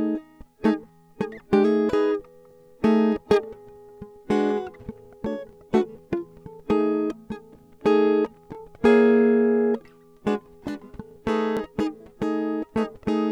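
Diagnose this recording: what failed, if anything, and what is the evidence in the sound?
The fault sits at the buffer or block-processing stage: overlapping chunks. The music carries a brief stutter at 2.51–2.53 s, 5.53–5.55 s, 8.55–8.57 s and 11.57–11.59 s, a steady beat roughly 3 s apart. At each join, the next 3.0 s chunk begins 20 ms before the previous one ended, so that 20 ms of audio plays twice and the waveform jumps at the seam, producing a regular click.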